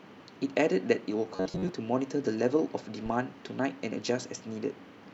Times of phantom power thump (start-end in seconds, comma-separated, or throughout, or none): 3.06-3.13